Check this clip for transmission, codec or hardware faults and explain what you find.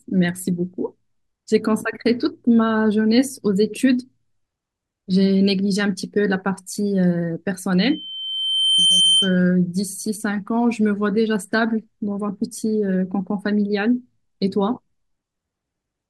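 One fault is present: loudspeaker feedback squeal. From 7.81 to 9.39 s, a 3.1 kHz tone swells over about a second to sit somewhat above the speech. The microphone is hearing its own loudspeaker, and the loop runs away at that frequency.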